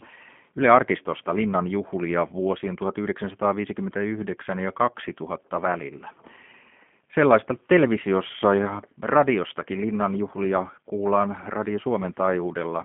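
From start to finish the speech carries G.729 codec damage: an 8 kbit/s model rebuilds it from a vocal-tract filter, pitch predictor and sparse pulses, so it sounds rough and synthetic. A spectrogram shows an empty band above 3.5 kHz.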